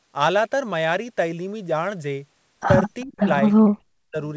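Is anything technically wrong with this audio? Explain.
Yes. There are two kinds of fault, both near the end.

From 3.01 to 3.05 s there is an echo leak. A faint, delayed copy of the speech comes through, about 0.4 s behind the original. The likely cause is a far-end loudspeaker whose echo canceller let some of its microphone pickup slip back into the call.

Speech suppressed in double talk follows, from 3.04 to 3.27 s and again from 3.59 to 4.18 s. The speech drops sharply, sometimes nearly to silence, in broken pieces. This likely happened because the echo canceller treated overlapping talk as echo and turned it down.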